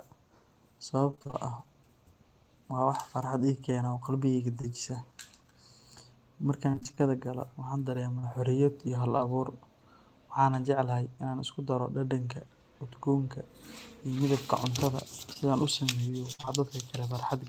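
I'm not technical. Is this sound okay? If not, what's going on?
No. The call loses small pieces of sound along the way, and the receiving end patches over the holes.

The stronger problem is repeated packet loss, which gives a robotic sound. From 1.11 to 1.35 s and again from 6.71 to 6.99 s, just before "galo waxaan", the speech keeps dropping out in quick succession, six and then seven times. About half of each stretch is filled by stretching out the last bit of sound. That is what makes it choppy. From 15.33 to 16.49 s it happens four more times, further apart, with one hole of about 56 ms.

The milder problem is short concealed packet loss. At 4.61 s, at 8.19 s just after "galo waxaan", and at 9.17 s, a single hole of 20 to 40 ms is patched once and the real audio then blends back in. Each one sounds like a brief smear or wobble, and a short consonant may go missing. The difference is that here the gap is single and isolated, so you hear one blip rather than a run of them that turns the voice robotic.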